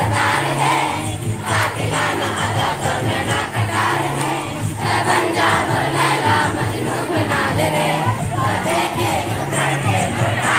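No faults are audible anywhere in the clip.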